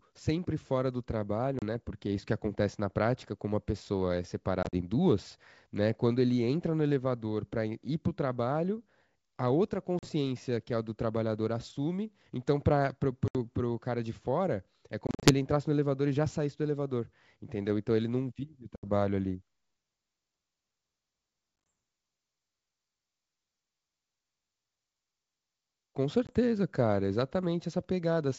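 Packet loss on an ADPCM call breaks up this speech clip at 1.59, 4.63, 9.99, 13.28, 15.07, 18.76, 21.69 and 26.27 s. Each loss opens a hard-edged silent hole of 20 to 120 ms, some scattered over up to 160 ms. Afterwards the decoder's adaptive predictor and step size no longer match the sender's, so the speech returns with brief slight distortion. The wideband G.722 coding itself sounds clean.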